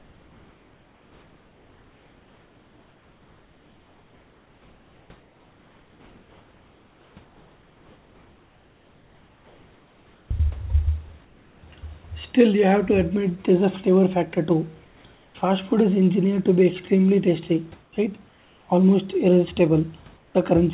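Comfort noise in place of the background occurs at 0.0–10.31 s, 11.25–11.63 s, 14.85–15.35 s (just before "food is engineered to"), 17.83–17.93 s, 18.29–18.69 s and 20.17–20.35 s. The real room background turns into a steady, featureless hiss, about 3 to 4 dB quieter in the 11.25 s, 17.83 s, 18.29 s and 20.17 s pauses, likely because the sender stopped transmitting during pauses and the receiver synthesised filler noise.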